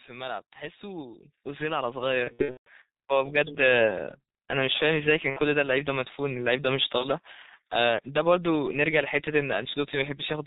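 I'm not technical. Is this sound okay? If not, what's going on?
No. The whole recording sounds muffled and hoarse, with soft, smeared consonants. That comes from the G.723.1 codec, an old internet-phone format that keeps very little detail. It cuts away the upper range of the sound and tracks the voice only coarsely, so the damage here is heavy.

From about 0.58 to 3.65 seconds, the speech and the background noise both grow steadily louder. That is automatic gain rising: the system judged the input too quiet and slowly turned up the volume over about three seconds.

Around 2.24 to 2.71 seconds, the speech breaks into a stretched, fading sound and stays weak briefly afterward. This is VoIP packet loss concealed by the speech codec: pieces of the audio never arrived, so the decoder guessed by repeating and fading what it last heard. Shorter versions occur at 5.30 to 5.40 and 6.98 to 7.06 seconds.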